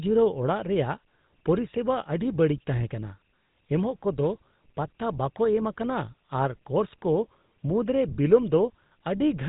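From start to finish the speech passes through the GSM full-rate codec, and the damage is plainly audible. The codec rebuilds each voice from a vocal-tract model driven by evenly spaced pulses, discarding most of the excitation detail. That gives a buzzy, gravelly roughness, which fits the 13 kbps full-rate mode. Nothing survives above 3.8 kHz. A plain low-pass filter would only muffle the sound, whereas this grainy, rasping texture marks a codec.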